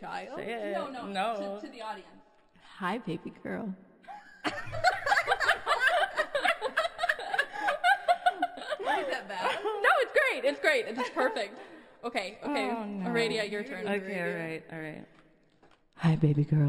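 Throughout, imaging from linear upsampling: straight-line interpolation, which fits a 12 kHz source raised to 44.1 kHz, dulls the top near 6 kHz and leaves a faint mirrored copy between 6 and 12 kHz, roughly 30 dB down. It sounds like a light metallic shimmer. A spectrogram shows the mirrored band above 6 kHz.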